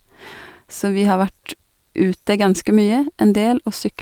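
No faults turn up anywhere in this speech recording, so there's nothing to flag here.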